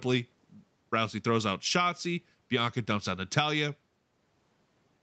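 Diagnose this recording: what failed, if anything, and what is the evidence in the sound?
Nothing failed in this recording.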